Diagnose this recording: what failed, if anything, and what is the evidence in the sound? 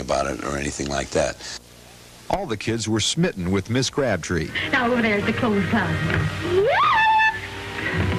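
The failure is in the analogue wiring: video or display buzz comes in at 1.06 s and continues to the end. It is a harsh 60 Hz buzz with a spray of hash above it, sitting roughly 30 dB below the programme. A screen or video cable is coupling its field-rate pulses into the audio lines. Ordinary mains hum would be a smoother tone built on low harmonics. Here the spiky waveform and the broadband hash point to a display source.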